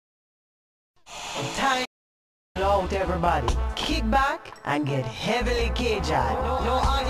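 At 1.85 s the sound just cuts out for about 0.7 s and picks up again at 2.57 s, a playback stall, likely the player running dry on data.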